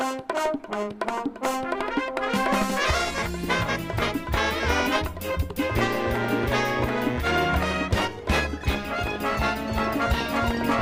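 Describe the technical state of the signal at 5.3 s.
At 5.3 s the signal is intact, with no dropout, clipping, distortion or other fault to be heard.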